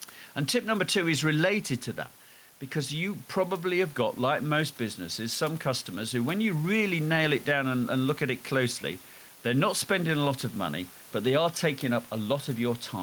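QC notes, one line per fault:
Throughout, gain pumping: the gain swings by around 5 dB, so the level seems to breathe, with the room noise sitting about 28 dB below the speech. This is likely input gain set too high with a fast limiter clamping each loud syllable and releasing in the gaps. On a waveform the peaks look flattened and evenly capped.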